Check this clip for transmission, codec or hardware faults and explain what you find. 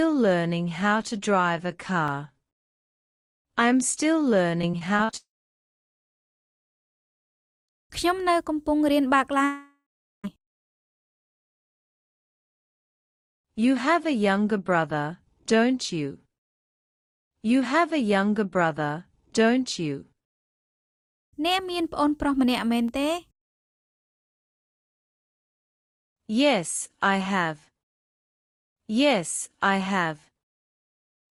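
There are three kinds of fault here: two brief blocks of digital silence, a stretch of repeated packet loss, and two long gaps that behave like network dropouts.

Block of digital silence, at 2.08 s and 22.88 s. Most likely the output buffer was not filled in time, so samples were replaced with zeros. The first hole lasts 2.9 ms, which fits a 128-sample block. The second lasts 0.57 ms. Each one cuts abruptly to zero and back, so it is heard as a tick.

Repeated packet loss (robotic sound), from 4.61 to 5.15 s. Packets went missing six times in about half a second, and the longest gap was 40 ms. The receiver patched each hole by extending the previous sound, and about a quarter of the span is covered that way. The result is choppy, with pieces missing.

Long network dropout, from 5.17 to 7.71 s and from 9.45 to 10.26 s, likely caused by audio failing to arrive at all. In each case the last sound is continued and fades out, then silence follows. 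The first gap is silent for about 2.4 s and the second for about 0.4 s. When the audio returns, the missing portion is simply gone.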